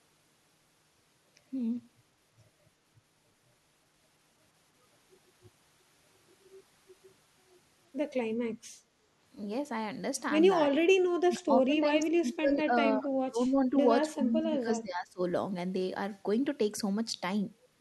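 In this speech recording, the talker's level repeatedly sinks by roughly 20 to 30 dB, with parts of the speech chopped away, at 10.94–11.05, 11.24–12.73, 12.97–13.86 and 14.12–15.21 s. This is likely speech suppressed in double talk, where an echo canceller could not separate the local talker from the loudspeaker echo of overlapping far-end speech and attenuated everything.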